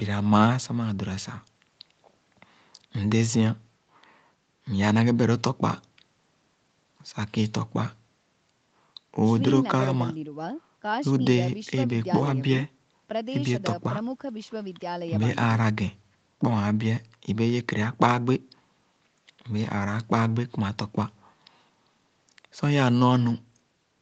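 No technical faults occur in this speech, which has simply passed through ordinary call processing that leaves nothing above 8 kHz.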